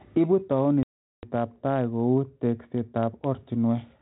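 A speech recording over a G.726 ADPCM link at 32 kbit/s, with that codec's band limit and light coding roughness. From 0.83 to 1.24 s a run of packets was lost in a packet loss on an ADPCM call, which fits roughly forty packets. The 400 ms of missing audio was replaced by silence, leaving a hard-edged hole. When the speech resumes, the receiver's adaptive predictor and step size no longer match the sender's, so the first moments after the gap come back distorted until the decoder resynchronises.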